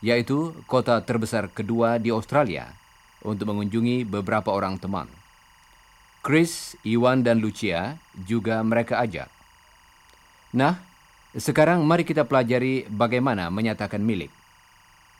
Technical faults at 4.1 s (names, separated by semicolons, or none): timecode bleed